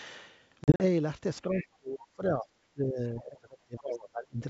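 From 0.64 to 0.82 s the speech breaks into hard-edged gaps, about 100 ms of silence scattered over 160 ms with runs up to 40 ms. The speech returns slightly distorted, at times clicky or at the wrong level. This is packet loss on an ADPCM call: dropped packets, which points to roughly five, left the decoder's predictor and step size out of step with the sender's.

Between 1.43 and 2.5 s the voice repeatedly dips, by as much as roughly 30 dB, for around 0.7 s in total. This is speech suppressed in double talk, likely an echo canceller turning everything down while both sides spoke at once.

Within that stretch, from 1.53 to 1.63 s, a scrap of the other side's voice leaks through at roughly 15 dB below the talker. It is likely loudspeaker echo the canceller failed to remove.

From 2.73 to 4.42 s the same double-talk suppression returns, with the speech sinking by up to about 25 dB for roughly 1.5 s altogether. 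The wideband G.722 coding is heard carrying the speech throughout.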